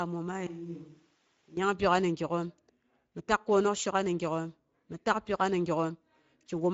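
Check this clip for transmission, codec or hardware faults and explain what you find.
Two problems stand out: a Speex codec coloring the whole clip, and a short switch to a distant microphone near the start.

The Speex codec damage runs throughout and is plainly audible. Speex is a CELP coder that models the voice with a filter plus an excitation signal, and here there aren't enough bits to code that excitation cleanly. The speech comes out noisy and a bit hoarse, and nothing survives above 7.6 kHz. The grain fits a mid-rate mode somewhere around 16.8 kbps.

The switch to a distant microphone runs from 0.47 to 1.57 s. The voice suddenly turns roomy and hollow and loses its low end, then snaps back just as abruptly. During that stretch it drops about 10 dB, and room noise rises to sit only around 25 dB below the speech. That pattern points to the close mic's signal likely dropping out and a farther pickup, such as a camera mic, filling in for about a second.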